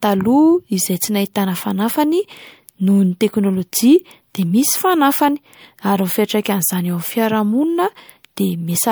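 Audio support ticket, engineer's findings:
Swirly, smeared, hollow speech across the whole clip; consonant attacks blurred. Likely generation loss: about three MP3 passes, consistent with 96 kbit/s, each requantising and stacking noise and spectral holes.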